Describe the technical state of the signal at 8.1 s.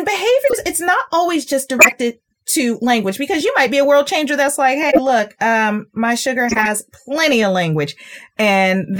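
At 8.13–8.24 s, just after "plenty of language", a corrupt frame decoded: several damaged frames were played anyway, misplacing energy into a chirp, squeak, blip or noise burst peaking around -20 dBFS.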